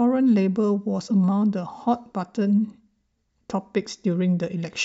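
Speech, with a glitch at about 1.09 s where the sound lurches forward and roughly 50 ms of audio is simply missing. These are compressed frames skipped: about two whole frames of 23.2 ms each were never played, either because they were absent from the file or because the decoder rejected them as damaged.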